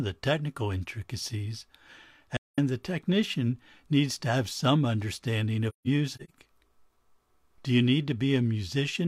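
At 2.37 to 2.59 s, just before "the technician needs to", AAC frame loss with muting leaves a 0.21 s silent gap. The decoder zeroes the missing spectrum, so overlapping windows fade it out and back in. From 5.69 to 6.30 s, after "to have some understanding", shorter holes, the longest around 150 ms, total 0.26 s.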